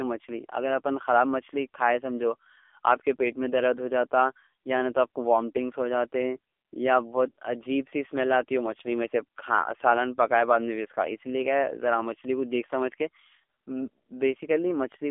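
AMR narrowband mobile codec damage runs through the whole speech clip: nothing passes above 3.5 kHz or below 300 Hz, and the voice sounds heavily buzzy and synthetic. The vocal-tract model is starved of pulses, which fits a low mode near 6.7 kbps.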